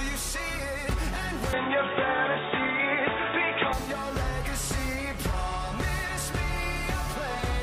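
Between 1.53 and 3.73 s the audio goes dull and boxy, with nothing above 3.8 kHz, a level shift of around 5 dB and a new noise floor roughly 30 dB down, with no gap at either edge. That's likely the input switched to a poorer device and back again.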